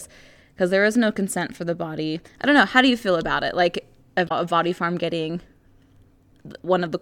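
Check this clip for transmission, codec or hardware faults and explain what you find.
One transmission fault is present in the speech. From 4.25 to 4.32 s, just before "a body farm getting", damaged data in the compressed stream makes the decoder lose frame sync, producing a brief chirp, squawk, click or short hole.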